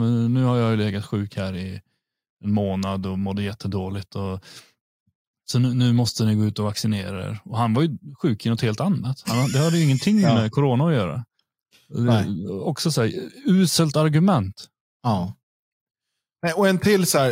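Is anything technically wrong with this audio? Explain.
No, nothing technically wrong turns up here; this speech recording comes through without any fault to point to.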